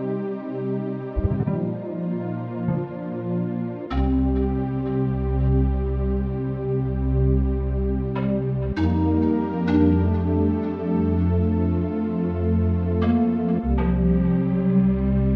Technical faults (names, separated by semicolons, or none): clock slip clicks